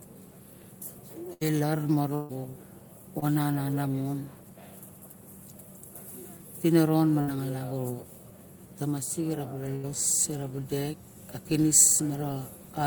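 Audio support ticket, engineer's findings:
Burst of packet loss at 1.33, 2.15, 7.21 and 9.75 s: held buzz or fading hiss, then audio skips ahead 60–140 ms. Jitter-buffer concealment.

Short concealed packet loss at 3.19 s: brief smear, about 20 ms lost, filled and crossfaded back. Decoder PLC.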